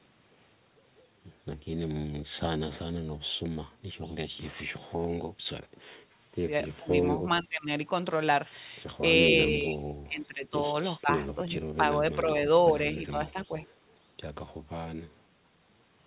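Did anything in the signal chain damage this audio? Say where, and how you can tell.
Yes, in the call-processing stage. Speech is suppressed in double talk four times: the level sags and parts drop out between 6.79 and 7.68 s (down about 20 dB), 9.49 and 10.55 s (about 30 dB, roughly a second affected), 11.01 and 12.29 s (about 15 dB), and 13.1 and 13.56 s (a brief 10 dB dip). The likely cause is the echo canceller failing to separate its own talker from the far side's loudspeaker echo during overlapping talk and attenuating everything.

An echo leak sits between 13.3 and 13.66 s: a faint delayed copy of the speech, around 30 dB below it and trailing by 426 ms, rides under the audio. The likely cause is a speakerphone whose canceller let part of its microphone pickup slip through and return down the line. The band-limited sound, with nothing above 4 kHz, comes from the call codec itself and fits G.711 A-law.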